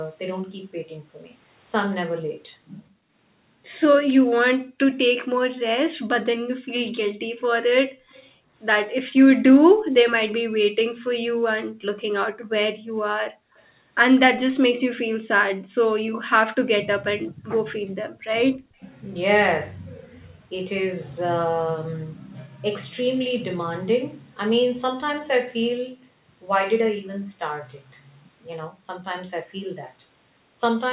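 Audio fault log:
3.03–4.79 s, 7.89–8.49 s and 11.64–17.95 s: background gated by the echo canceller. Room sound drops away briefly, by up to about 40 dB, because the canceller clamps the microphone while the loudspeaker plays.
8.1–9.12 s, 13.57–13.63 s and 18.81–18.86 s: echo leak. A faint copy of the speech trails 202 ms behind, roughly 30 to 40 dB down, likely loudspeaker sound the canceller failed to remove.
18.23–18.74 s: speech suppressed in double talk. The voice sinks in pieces, by roughly 35 dB, likely because the canceller turned down the talker while both sides spoke at once.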